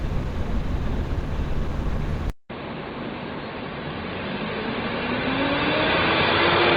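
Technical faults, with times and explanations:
throughout: Opus compression, likely at a low rate near 16 kbps in hybrid mode, leaves the everyday sounds plainly rough, grainy and hoarse despite content reaching 20.1 kHz.
2.30–6.77 s: input switched to a poorer device, likely, after a 200 ms gap; the sound turns dull above 4.6 kHz, drops about 5 dB in level, and gains faint background noise.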